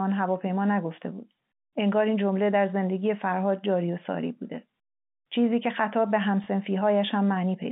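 At 6.44 to 6.46 s a small blip: packet loss with last packet repeated, one lost 20 ms packet replayed.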